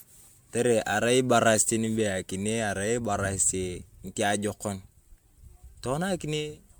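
Throughout the speech, the sound has the swirly, hollow smear of generation loss, likely from repeated lossy re-encoding: what fits an MP3 chain at 128 kbit/s, run through around seven times. Each pass requantised on a shifted frame grid, so noise and gaps accumulated and consonant attacks blur. On a spectrogram, the content stops at about 20.1 kHz, with patchy holes and smeared, warbling harmonics below it. The waveform's transient edges look softened.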